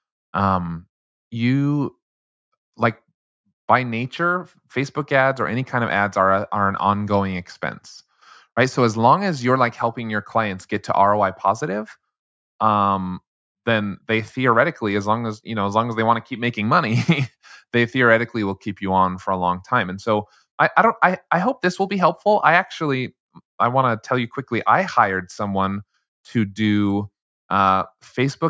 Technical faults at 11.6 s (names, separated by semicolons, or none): none